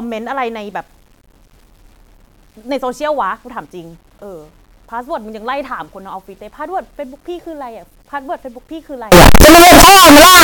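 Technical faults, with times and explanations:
9.12 to 10.44 s, signed and unsigned mixed up: right at the tail the speech collapses into a wall of harsh, very loud distortion, and the quiet bits get just as loud as the rest. That's likely samples being read with the wrong sign convention. Flipping the top bit turns every zero crossing into a leap from one extreme to the other. The samples here are 8-bit.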